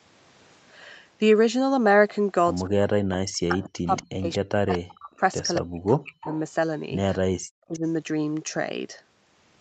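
At 2.66 s a faint delayed copy of the speech surfaces, about 25 dB below it and trailing by 233 ms. This is an echo leak, likely from a far-end loudspeaker whose echo canceller let part of the microphone pickup back into the call. It returns as short scraps at 3.58, 3.96, 4.75 and 6.24 s, rising to about 15 dB below the speech at 3.96 and 4.75 s and about 20 dB at 6.24 s. The fixed 233 ms lag marks these as copies rather than a second talker.

From 2.72 to 5.21 s the main speech keeps sinking and breaking up, for around two seconds in total, with the deepest drops near 40 dB. This is speech suppressed in double talk: with both sides active, the canceller likely could not tell its own talker from the loudspeaker return and turned both down. The same dips recur at 5.6 to 6.28 s and 7.31 to 7.83 s, each about half a second in all. Unlike the echo leak, nothing extra is added here. The wanted speech itself thins and drops out, and the audio stays band-limited to about 8 kHz by the call path throughout.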